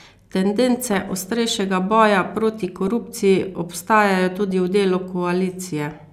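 DAB burbling breaks into the speech three times, from 0.92 to 1.29 s, 2.64 to 3.15 s and 4.32 to 4.51 s. Weak reception lets bit errors slip past the error correction into the MP2 stream, which fits a bit error rate of well under one percent. Corrupted samples then put short blips of noise into single sub-bands and corrupted scale factors make sub-bands leap in level for up to a frame, so each stretch burbles with artefacts laid over the speech.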